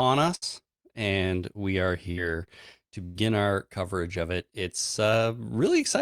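Three bursts of packet loss interrupt this speech. In each, a run of packets went missing or arrived too late, and the receiver extended the last sound while fading it down. At 0.35 to 0.44 s, just before "and we are", about 60 ms of audio vanishes. At 2.11 to 2.19 s, right after "and we are", another 60 ms drops out. At 3.05 to 3.17 s, before "our coverage of it", a longer 100 ms gap is papered over. Each time a brief held buzz or fading hiss stands in for the missing audio before the speech jumps ahead.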